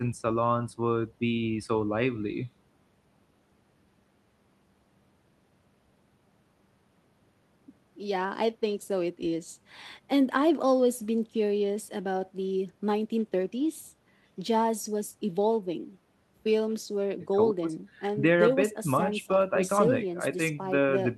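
Nothing technically wrong turns up anywhere in this speech recording, so there's no fault to point to here.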